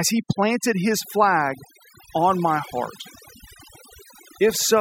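Overdone noise removal runs through the whole of this speech clip, from start to end. A noise reduction stage set too aggressively is pulling individual frequency bands right down, or switching them off, whenever their level sits close to its estimate of the background noise. The softer parts of the speech fall into that range and get stripped along with the noise. What remains is a lowered background dotted with twinkling specks.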